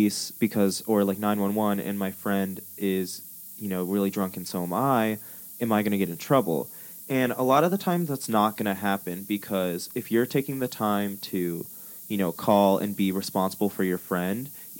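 A steady, thin hiss runs under the speech from start to finish, rising sharply toward the top of the band and sitting only about 15 dB below it. This is low bit depth with noise shaping: just 7 bits, with the rounding error pushed upward in frequency.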